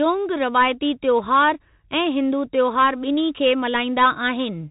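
From start to finish the speech passes through a Bluetooth CVSD headset codec. Nothing reaches above about 3.8 kHz, and the one-bit delta modulation, whose step size keeps adapting, cannot keep up with fast, loud movement, so the damage is plainly audible. S sounds turn scratchy, and a fine granular hiss sits under every phrase, which fits a 64 kbps CVSD stream. That grain and slope overload set it apart from a plain low-pass filter or a clean telephone band limit.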